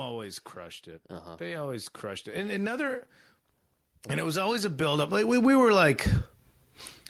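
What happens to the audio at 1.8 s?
At 1.8 s the level is partway through a rise from automatic gain control, which runs from 1.37 s to 3.09 s. The gain stage judged the incoming speech too quiet and stepped its amplification up gradually, by about 8 dB in total over those 1.7 seconds. Because the gain acts on the whole signal, the voice and the background noise swell together.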